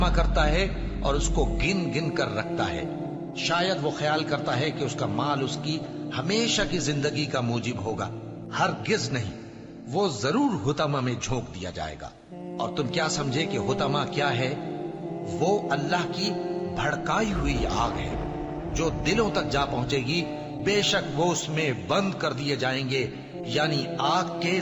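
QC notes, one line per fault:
15.34 s to the end: crude rate conversion. From 15.34 s a gritty, inharmonic fizz rides on the sound and follows its loud and high parts. The samples have been stretched to a new rate by straight-line interpolation between neighbours, with no filtering. The ratio points to a 32 kHz to 44.1 kHz change. The leftover error forms shifted, inharmonic copies of the material. It sits roughly 35 dB below the signal.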